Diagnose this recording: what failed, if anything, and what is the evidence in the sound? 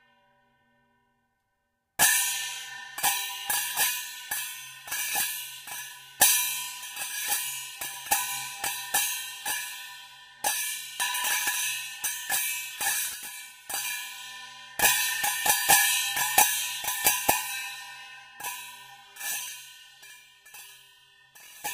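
Nothing failed here, as far as I can hear: the everyday sounds in this recording come across without any dropout, glitch or other fault to point at.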